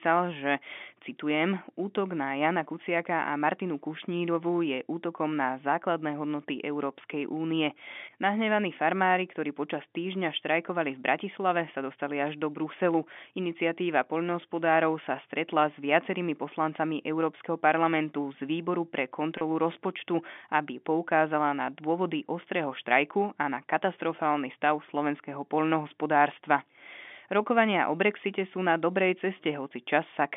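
At 19.38 s, between "parlamentu z výboru pre" and "rozpočtu aby poukázala na", there is a 30 ms dropout with packet loss and pitch repetition. A single lost packet fits the gap. The receiver bridged it by replaying the last pitch period, so the speech briefly holds on a slightly buzzy, sustained tone before resuming.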